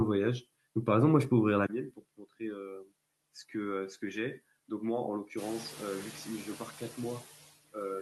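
From the start, noise suppressor artifacts are present. The suppressor pulls steady noise down by about 18 dB in each frequency band, frame by frame. Gaps between words sink, and the leftover noise swells under speech. Around 5.5 s the room noise rises by about 14 dB, ending about 17 dB below the speech.

At 1.66 s there is a 20 ms silence. After it the sound turns duller and about 10 dB quieter. The band narrows, and a faint new noise floor appears. This is likely an input switched to a poorer device, lasting to the end.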